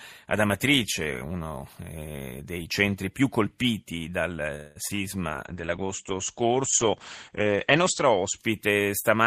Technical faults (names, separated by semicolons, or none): call audio freeze; short concealed packet loss; call bitrate drop